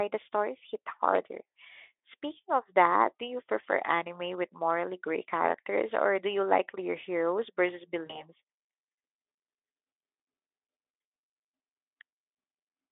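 At 8.06 s, just after "like your heroes versus", VoIP packet loss concealed by the speech codec replaces about 40 ms of lost audio with a buzzy or noisy, fading extension of the last sound, which stays smeared until 8.23 s. Unlike a dropout, there's no silent gap.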